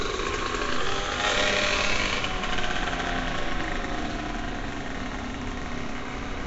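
Throughout, the sound is rough and smeared, with a hissy halo and nothing above 7.7 kHz. This is likely Nellymoser compression, noise-filling weak bands at roughly 32 kbps.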